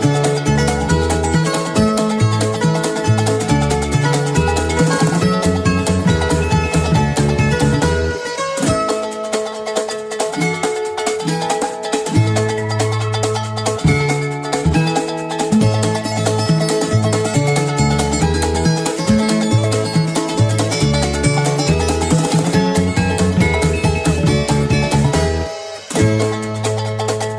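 No technical faults are audible anywhere in this recording.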